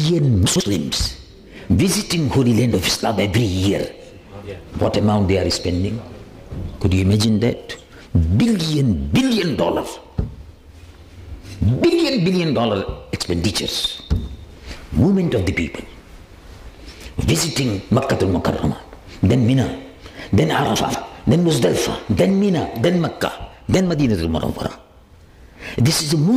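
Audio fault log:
0.46–0.60 s and 20.76–20.94 s, chunks out of order: a block of audio about 46 ms long was delivered late and played after blocks meant to follow it, two blocks late at 0.46 s and three at 20.76 s. No audio is lost, but each moment comes out jumbled for its length, and the misplaced block leaves three hard joins where the sound jumps abruptly.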